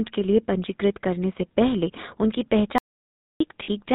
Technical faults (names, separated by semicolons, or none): GSM full-rate codec; audio dropout to silence; lost GSM frames